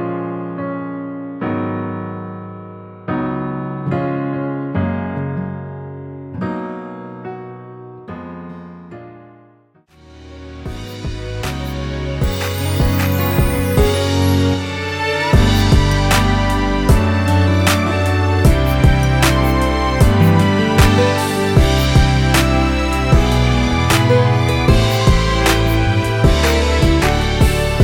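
Nothing stood out on listening; no technical problem could be heard anywhere in the audio.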